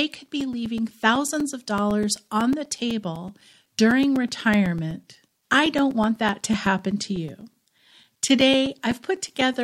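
From about 0.16 s right through to 9.54 s, the speech is peppered with periodic USB or driver dropouts. Every 0.125 s, so eight times a second, something stalls the bus or the audio driver and a sliver of sound, roughly 4 ms, goes missing and gets filled with silence. You hear it as a steady, even ticking riding on the speech, dozens of little pops that sound only while there's signal.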